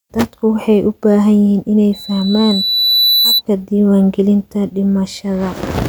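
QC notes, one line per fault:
1.93–3.42 s, loudspeaker feedback squeal: a pure tone at 4 kHz swells over roughly a second until it is about as loud as the speech. The microphone is re-hearing its own loudspeaker, and at that frequency the loop gain exceeds one, so the tone keeps feeding itself.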